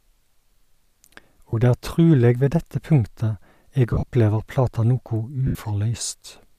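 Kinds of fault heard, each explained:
Lost LE Audio frames: the decoder filled missing frames with the last spectrum, signs randomised. Brief noisy smears replace the sound at 1.5, 3.91–4.13 and 5.47–5.55 s.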